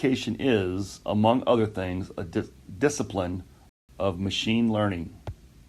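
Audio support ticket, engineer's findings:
Speech cuts to dead silence at 3.69 s, resumes at 3.89 s exactly where it stopped; no syllables dropped, gap about 0.19 s. Rebuffering stall. Component: client playback buffer / network delivery. Mechanism: player drained its downloaded audio, halted output until the next chunk arrived, then continued. Content intact; 194 ms added to total duration.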